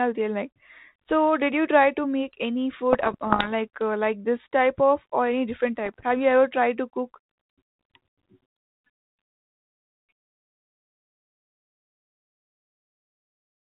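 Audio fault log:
2.93–3.48 s and 5.85–6.04 s, bit errors on an ADPCM link: after "try to make any" and again after "of or any different", the 32 kbit/s G.726 stream takes corrupted bits at a rate under half a percent, causing pops and rough, gritty bursts with brief jumps in level. Each flipped bit throws off the decoder's step size and predictor, so the damage rings on for milliseconds. On a spectrogram these show as broadband vertical streaks below 4 kHz. The waveform shows jagged spikes and short envelope swells.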